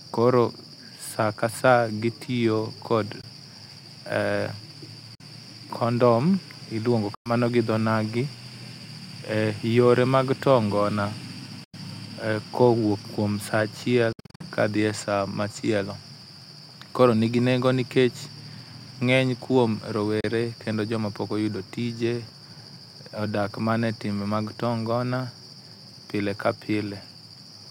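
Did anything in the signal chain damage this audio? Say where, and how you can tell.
Yes. Six holes of silence with abrupt or briefly faded edges appear at 3.21, 5.15, 7.14, 11.64, 14.12 and 20.20 s. Most last 15 to 107 ms. At 14.12 s, gaps scatter across 0.27 s. This is likely Bluetooth dropout on the playback link: late packets are discarded and the sound resumes as if it had played on.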